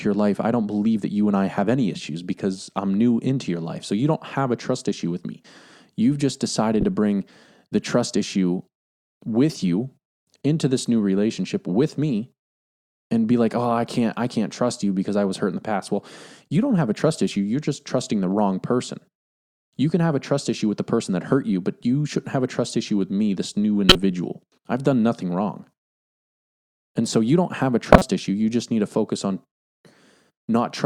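Three short glitches cut into the speech: at 6.81–6.84 s just before "to bring the trust", at 23.89–23.96 s after "with me this new", and at 27.93–28.02 s after "you don't have a", the last two nearly full scale. Each is a corrupt frame decoded: damaged bits across a few frames misplaced energy in frequency.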